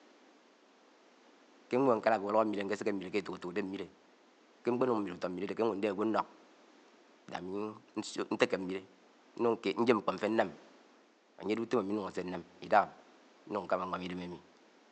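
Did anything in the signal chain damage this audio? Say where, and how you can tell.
No, nothing in the chain damaged this speech; the only thing under it is the room's own background noise, sitting about 30 dB below the talker, which belongs to the recording rather than to any stage after the microphone.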